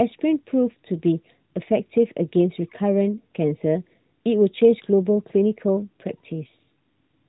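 No technical faults are present in this speech recording, which carries the narrowband character of the AMR narrowband mobile codec running at 12.2 kbps, with its light coding texture and nothing above about 3.8 kHz.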